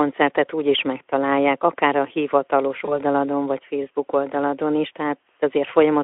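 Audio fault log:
2.85–2.98 s, VoIP packet loss concealed by the speech codec. The sound suggests one lost 20 ms packet. The Speex decoder fills the gap from its last pitch and filter at falling gain. This gives a short stretched sound that fades. Each frame builds on the last, so the damage lasts about 130 ms.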